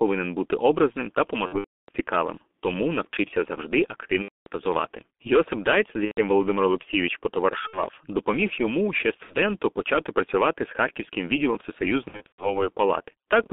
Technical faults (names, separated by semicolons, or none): G.723.1 codec; VoIP packet loss concealed by the speech codec